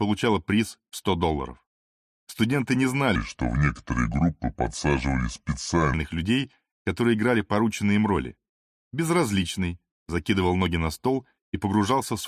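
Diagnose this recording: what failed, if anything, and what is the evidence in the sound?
Wrong sample rate at the playback stage, from 3.16 to 5.94 s: the sound slows to 0.726 times its speed and drops about 5.5 semitones, which fits 44.1 kHz material clocked out at 32 kHz. On a spectrogram, every harmonic slides downward and events stretch horizontally.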